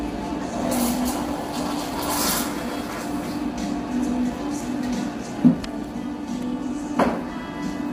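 From start to finish, the sound is rough and grainy. The tonal parts have a noisy haze filling the gaps between their harmonics. The top band sounds dulled and partly synthetic. The likely cause is low-delay AAC compression, the AAC-ELD codec used for video calls. Its very short frames cannot separate closely spaced harmonics well, so it codes less efficiently at a given rate. The damage is heavy, which fits a low rate of around 24 kbps.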